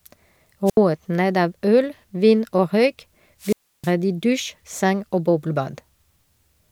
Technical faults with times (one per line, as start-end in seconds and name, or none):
0.66-0.77 wireless microphone squelch dropout
3.40-3.92 wireless microphone squelch dropout